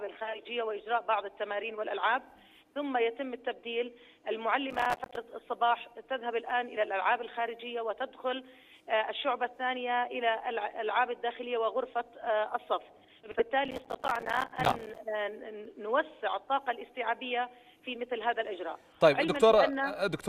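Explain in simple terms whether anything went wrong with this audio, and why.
Twice the processor fell behind and couldn't finish its small chunks of audio on time. The result is processor overload crackle from 4.70 to 5.16 s and again from 13.65 to 14.98 s. Each missed chunk became a tiny dropout of silence, which fits chunks of about 5 ms. Strung together, these dropouts sound like gritty crackling that stops once the load eases.

There are also two spots with frames out of order, where neighbouring pieces of audio arrived swapped and played in that order. From 13.23 to 13.42 s, two 80 ms pieces trade places, and at 17.8 s two 20 ms pieces do the same. Each spot sounds like a brief garbled flutter, but no time is lost.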